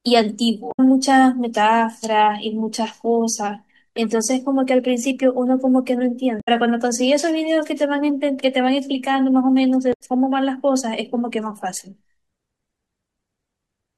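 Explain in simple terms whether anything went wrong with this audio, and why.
Three short glitches interrupt the speech, each lasting about a tenth of a second: from 0.69 to 0.80 s, from 6.37 to 6.49 s, and from 9.90 to 10.01 s. They come from damaged data in a compressed stream. A few stretches of the stored or transmitted file were corrupted. The player couldn't make sense of those pieces, lost its place, and produced a brief glitch while it hunted for the next readable chunk of audio.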